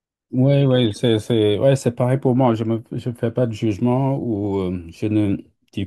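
No technical faults can be heard anywhere in the speech, and the signal stays continuous and steady throughout.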